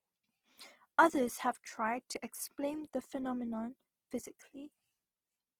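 Throughout the speech, the audio was likely taken from a very low-bitrate encoding and then saved again as a high-bitrate MP3, a case of low-bitrate audio saved at a high bitrate. The smeared, coarse character fits a first pass around 16 kbit/s, which the later high-bitrate MP3, with nothing above 20.2 kHz, cannot undo.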